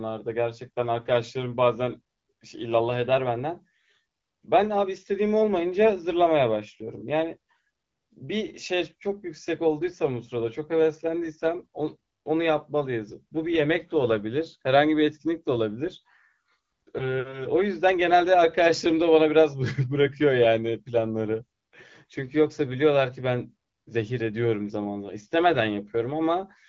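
Speech over what sounds like an AMR wideband (HD Voice) link, consistent with the 12.65 kbit/s mode, with no technical faults present.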